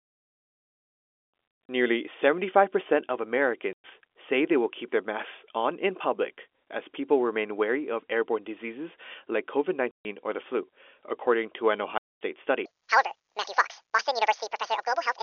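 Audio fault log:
1.64 to 12.21 s, packet loss filled with silence: the audio drops out in sudden gaps with hard edges. The first, around 1.64 to 1.69 s, is a scatter of holes totalling 150 ms over about 200 ms, the longest 70 ms. Then come gaps of 110 ms at 3.73 to 3.84 s, just before "say they will keep", and 140 ms at 9.91 to 10.05 s, before "or the flu according". The last is 230 ms at 11.98 to 12.21 s, after "flu according to an". The lengths fit 10 ms packets. Lost packets were replaced with digital silence, cutting the waveform abruptly.
12.66 s to the end, section at the wrong speed: the closing stretch becomes hurried and high, raised by about 10 semitones. Speed and pitch shift together by a factor of 1.84, so it is likely that this segment was played against the wrong clock, with timing and pitch scaled as one. The narrow telephone band of the G.711 line carries through this section as well.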